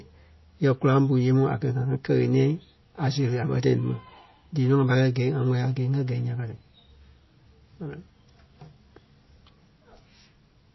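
Speech, with MP3 compression damage audible throughout. Nothing is heard above 5.8 kHz. The treble stops abruptly at that point, so s sounds lose their edge and the voice sounds dull. The remaining band sounds watery and swirly, because weak frequency lines drop in and out from frame to frame. Consonant onsets smear. The cause is likely an encoder starved of bits, which fits a low bitrate of around 24 kbps.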